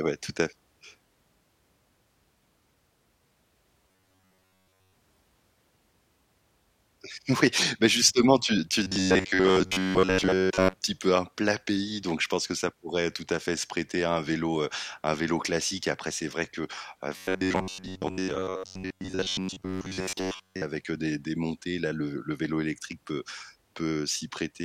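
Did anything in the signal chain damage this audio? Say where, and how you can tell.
Yes. Robotic sound from repeated short buffers: at 3.88–4.93 s, 8.83–10.74 s (after "bah justement tu tu") and 17.17–20.62 s (after "c'est vrai que heu") the speech becomes a rigid metallic buzz near 94 Hz. The likely cause is a starved driver buffer looping an 11 ms chunk, skipping most real audio.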